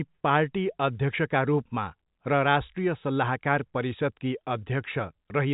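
Nothing stood out on listening to this speech clip, which carries the narrow band of ordinary G.711 telephone coding, with nothing above about 3.8 kHz.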